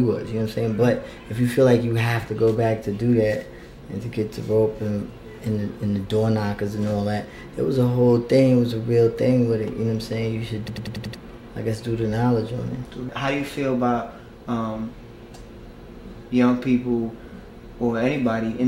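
From 10.68 s to 11.15 s there is a system hang loop: the host stalled while the hardware kept replaying its ring buffer. One 93 ms fragment, consistent with a 4096-sample buffer, repeats five times at 10.8 Hz. The result is a machine-gun stutter that costs about half a second of audio.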